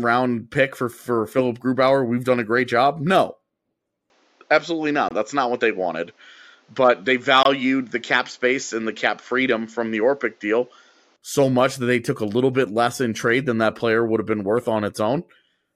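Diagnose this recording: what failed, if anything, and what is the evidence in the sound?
From 4.1 s to 11.16 s the input likely switched to a poorer device, at the driver or device-routing stage. The speech abruptly loses everything above 7.6 kHz and takes on a duller, boxier tone. A faint new noise floor appears, roughly 40 dB below the speech. There is no gap at either switch, and the level stays about the same. It is the narrower band and the changed colour that give the switch away.

Twice in that stretch the driver or buffer stage probably failed to deliver audio in time, leaving a block of digital silence. At 5.09 s and again at 7.43 s the signal drops to silence for about 23 ms, which fits one unfilled 1024-sample buffer. The sound cuts out and back with no fade. Each one is heard as a short hole in the speech.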